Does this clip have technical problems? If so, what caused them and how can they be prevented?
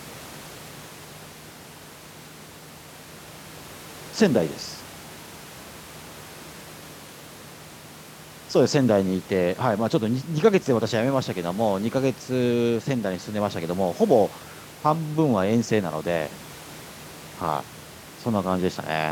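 No, the speech signal shows no technical faults, and the only other sound is the room's own background noise, sitting about 24 dB below the speech as part of the original recording.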